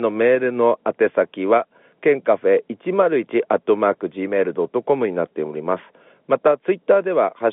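Nothing goes wrong anywhere in this speech, which just carries the usual narrow telephone sound of G.711 coding, with nothing coming through above about 3.8 kHz.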